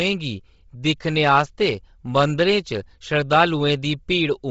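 Right through the speech there's a grainy, breathy edge and nothing above 7.7 kHz. That's likely Bluetooth LC3 compression pushed hard, with a sound that fits roughly 24 kbps and short 7.5 ms frames, zeroing much of the upper spectrum and patching it with noise.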